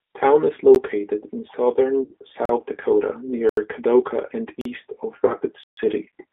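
Throughout, the speech carries the plainly audible damage of the G.729 codec at 8 kbit/s. The line band runs only from about 300 Hz to 3.6 kHz, so the sound is thin and boxy. Because the decoder rebuilds each frame from a vocal tract filter, a pitch predictor and a few pulses, voiced sounds come out slightly rough and synthetic rather than simply muffled.

At 0.75 s a block of digital silence of 13 ms gives a single tick. Further blocks follow at 2.45 to 2.49 s (40 ms), 3.49 to 3.57 s (80 ms) and 4.61 to 4.65 s (40 ms). The longest, at 5.63 to 5.77 s (139 ms), is a clear hole. In each, the output drops straight to zeros and returns with no fade.

Between 2.04 and 2.14 s comes VoIP packet loss concealed by the speech codec. About 60 ms was lost, which fits three 20 ms packets. A shorter case follows at 5.27 to 5.35 s, with 20 ms lost, which fits one packet. Here the decoder keeps extrapolating its last pitch and filter, so the sound smears into a buzzy, fading tone and stays weak briefly after recovery. 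Unlike the digital silence, there is no hard gap and no edge clicks.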